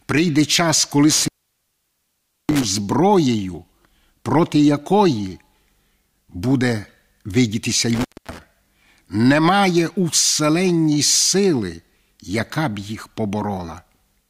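Intermittent contact breaks the speech at 1.1 to 2.6 s, after "час коли" and before "зброєю проти якої", and again at 7.9 to 8.4 s, after "буде видітися". A loose connection opens for about 1.21 s, then 0.24 s, so the audio drops out with crackle at each edge.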